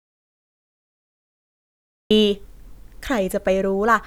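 From the very first moment the clip is dead silent, with no room tone or hiss at all, until the speech suddenly comes in at about 2.1 s, as if switched on mid-flow. This is an audio dropout to silence already in progress when the clip begins. The likely cause is a lost input, such as a disconnected device, a failed link or an accidental mute, while the recorder kept writing silence. Whatever was spoken during those first two seconds is missing.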